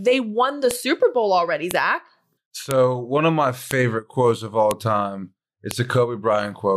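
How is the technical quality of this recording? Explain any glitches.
The recording is marred by a regular series of sharp clicks, caused by a file header played as audio. Snaps occur at 0.71, 1.71, 2.71 (just before "one of my"), 3.71 (between "one of my" and "quotes of"), 4.71 (after "quotes of") and 5.71 s. The speech was assembled from 1-second WAV pieces whose header bytes were left in and decoded as samples. Unlike random clicks or dropouts, these land exactly one second apart, regardless of what the speech is doing.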